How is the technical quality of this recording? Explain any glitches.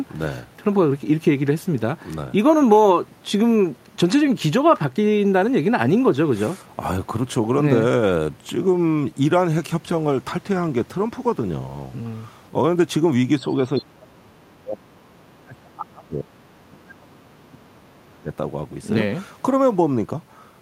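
Two stretches of this speech recording are heavily suppressed. Speech suppressed in double talk occurs from 13.64 to 16.36 s and again from 16.66 to 18.28 s. In both, the voice sinks by as much as around 30 dB. This is likely an echo canceller hearing both ends talking at once. Unable to separate the near talker from the loudspeaker's echo, it attenuated everything, cutting into the wanted voice along with the echo.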